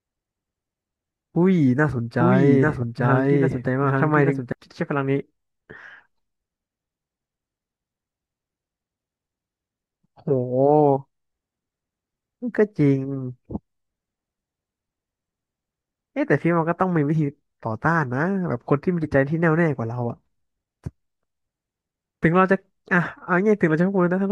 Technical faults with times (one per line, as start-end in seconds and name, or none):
2.18-4.52 doubled audio track